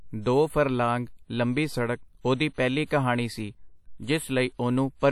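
Throughout the speech, the audio was likely passed through WMA compression, a transform codec whose long blocks spread quantisation noise over tens of milliseconds and whose sparse bit budget, which fits a bitrate around 48 kbps, zeroes out weak spectral lines. The damage is plainly audible: a ringing, washy smear around the speech, with a hiss that swells and fades along with it. Nothing remains above 17.9 kHz.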